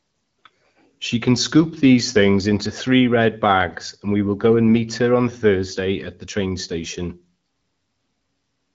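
Nothing's amiss in this speech clip; it's simply come through an AMR wideband (HD Voice) call path at 12.65 kbit/s, which is why there's nothing up above about 7.5 kHz.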